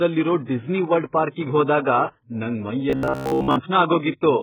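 From the first moment the speech sounds dull and smeared, with the high frequencies cut off, so sibilants lose their edge and vowels carry a watery, warbling texture. This is heavy damage from AAC compression, likely AAC-LC run at a very low bitrate, which fits something near 8 kbps. The coder drops everything above its cut-off and starves the remaining bands. A spectrogram shows a flat ceiling at the cut-off with patchy, hole-ridden energy beneath it.

From 2.90 to 3.56 s the speech turns into a rigid, metallic buzz that still roughly tracks the syllables. This is robotic sound from repeated short buffers: new audio is arriving too slowly, likely because of buffer underruns, and a short slice is replayed in its place for most of the span while real audio is skipped. The repetition imposes a fixed 66.8 Hz buzz, which fits a buffer of about 15 ms. The waveform shows near-repeating cycles across most of the stretch, and the spectrogram shows evenly spaced harmonics at multiples of 66.8 Hz.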